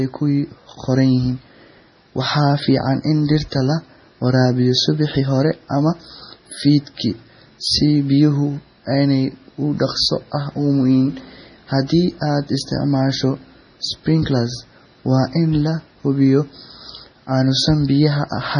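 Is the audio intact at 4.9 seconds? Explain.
No. At 4.9 s the speech carries the same heavy damage it has throughout, most likely MP3 compression at a very low bitrate. Nothing is left above 10.6 kHz, and weak frequency lines flicker on and off between frames, giving a watery, swirly sound with smeared attacks. That flicker is what separates it from a plain low-pass filter.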